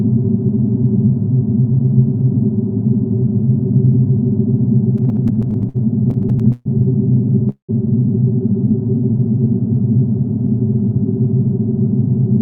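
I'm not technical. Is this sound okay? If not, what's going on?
No. There are three separate problems, all typical of audio sent over a network connection.

From 4.97 to 6.67 s there are repeated stalls (stutter): the sound stops and restarts 18 times in under two seconds. The receiving end kept running out of incoming audio and filled each wait by holding the last sound, about a third of a second in total, with the longest single hold around 0.13 s. Nothing is lost, but the audio sounds choppy and dragged. Unlike the next problem, this is many small hiccups in a row, not one stop.

At 7.49 s there is a single call audio freeze lasting until 7.71 s. The last sound hangs and fades for a moment, then goes fully silent for about a tenth of a second before the audio carries on exactly where it left off, so nothing is skipped. The likely cause is a batch of audio held up in transit, after which the receiver added roughly 0.19 s of extra delay to protect against it happening again. 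It is one clear pause, not a string of stutters.

From 8.71 to 9.45 s there is a jitter buffer slow-down. Nothing stops here. Instead the sound is stretched, playing at about 92% of normal speed while keeping the same pitch, so it comes across as slightly drawn out. The receiver was quietly repeating tiny slivers of the sound, adding about 63 milliseconds, to rebuild its reserve.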